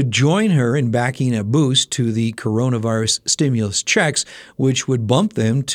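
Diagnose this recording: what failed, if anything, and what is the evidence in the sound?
Nothing failed: no stage of the chain, from wiring through to playback, leaves any audible trace of a fault anywhere in this speech recording.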